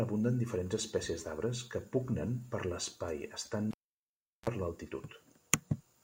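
At 3.71 s the speech is cut by a cable pulled and plugged in: a pop, about 0.73 s of near silence, then a brief 60 Hz mains buzz of roughly 36 ms as the plug reseats, and another pop at 4.49 s. Those pops and that buzz set it apart from a clean digital dropout.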